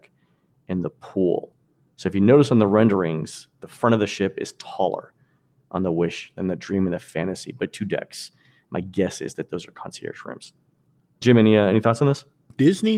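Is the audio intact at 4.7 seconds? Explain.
Yes, at 4.7 seconds the audio is intact, with no audible fault at that moment.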